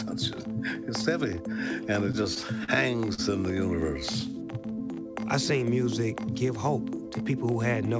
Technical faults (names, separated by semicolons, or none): repeated stalls (stutter); short stall from a late packet; jitter buffer slow-down; jitter buffer speed-up